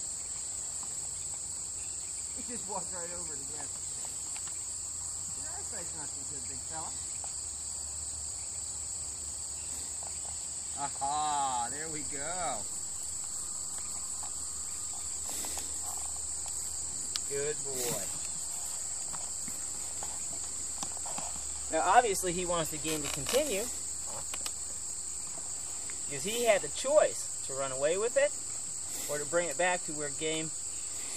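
At 11.94 s a DC step shifts the waveform's zero line by about -47 dBFS and holds to the end, heard as one low thump, visible as a baseline jump.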